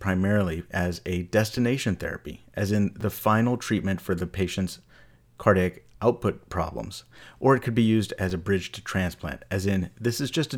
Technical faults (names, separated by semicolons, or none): repeated buffer